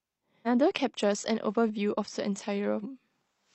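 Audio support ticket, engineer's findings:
Compressed frames skipped at 0.42 s and 2.79 s. Speech jumps ahead roughly 300 ms, about seven 46.4 ms frames. Decoder dropped missing or damaged frames.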